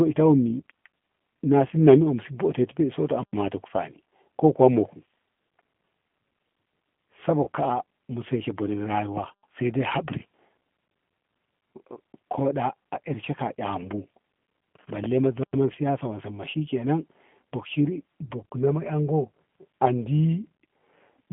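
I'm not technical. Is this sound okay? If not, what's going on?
No, not quite. The whole recording has gone through the G.729 codec, a compact phone-call format that rebuilds speech from a rough model of the voice rather than storing the actual sound. Anything above about 3.4 kHz is gone, so the speech sounds muffled, like an old phone line, and the compression damage is easy to hear: a slightly rough, synthetic edge on every word.

Around 7.44 to 7.48 s there's a short hiccup from VoIP packet loss concealed by the speech codec. About 30 ms of audio, which fits a single lost packet, never arrived. The decoder filled the gap by guessing from the sound just before it, so you'll hear a brief smeared blip there instead of a clean dropout.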